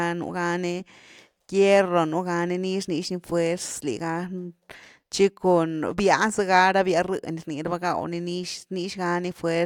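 Nothing goes wrong anywhere in this bit of speech, so there's no fault to point to at any moment.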